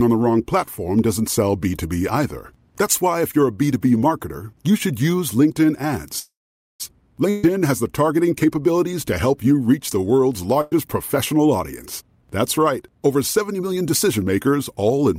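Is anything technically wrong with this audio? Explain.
Yes, the speech has three kinds of transmission fault.

From 6.19 to 6.82 s there is a call audio freeze: the last sound trails into a fading fill and then about 0.48 s of near silence. Packets were likely held up until the jitter buffer ran dry. Unlike packet loss, the speech resumes exactly where it stopped, with about 0.6 s inserted and nothing lost.

Two bursts of packet loss occur, at 7.30 to 7.45 s, just before "has the targeting capabilities", and at 10.61 to 10.73 s, right after "you reach the world's". Each time, the final sound is stretched into a fading buzz or hiss for about 0.13 s and 0.1 s. The speech then jumps ahead, skipping about 140 ms and 100 ms respectively. That skip is what distinguishes it from a freeze.

From 12.01 to 14.25 s a jitter buffer speed-up runs the speech at 108% speed, cutting roughly 0.2 s. It does this by removing short pitch-period slices to shrink a backlog. 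Pitch stays the same, so it sounds hurried rather than higher, unlike a plain playback-rate error.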